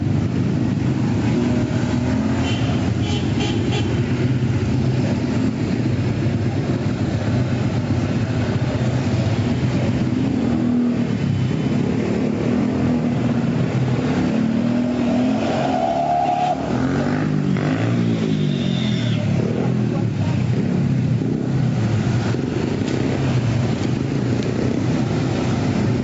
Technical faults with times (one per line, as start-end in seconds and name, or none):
0.00-26.04 gain pumping